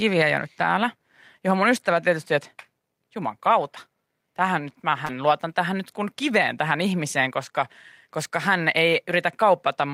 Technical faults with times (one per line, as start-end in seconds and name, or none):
5.05-5.12 short concealed packet loss
5.09-5.11 lost packet rebuilt from error correction